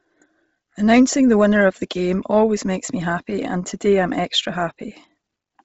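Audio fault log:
Throughout, Bluetooth LC3 compression: the speech sounds breathy and grainy, with nothing above about 7.7 kHz, and the top end is filled with noise rather than real detail. That heavy damage is likely from LC3 at a low rate, which fits 24 kbps in short 7.5 ms frames.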